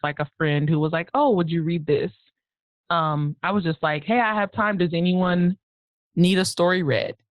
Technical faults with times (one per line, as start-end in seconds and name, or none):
0.00-5.82 adaptive stream starting at a low bitrate